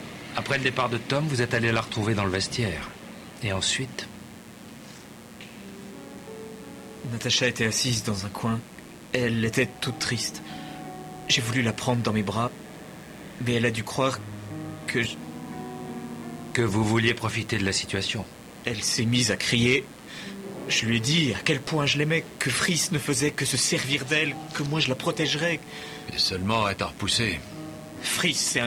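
A steady, raspy buzz sits under the sound from start to finish, about 25 dB below the main signal. This is mains buzz at 60 Hz: sharp switching spikes from a dimmer, rectifier or unshielded cable leak in, spraying harmonics up into the kilohertz range.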